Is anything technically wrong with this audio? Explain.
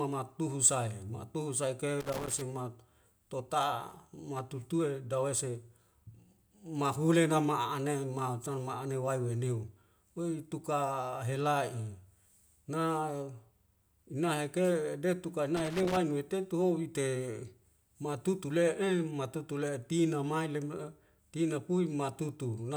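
Yes. Loose connector crackle appears from 2.00 to 2.41 s and again from 15.57 to 15.97 s. A worn or dirty contact in the signal path keeps making and breaking, chopping the speech, so each stretch comes through as an irregular burst of scratchy crackle.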